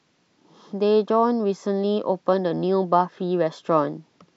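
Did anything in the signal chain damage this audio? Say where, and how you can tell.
No, nothing audible in this speech recording points to damage at any stage of the signal chain.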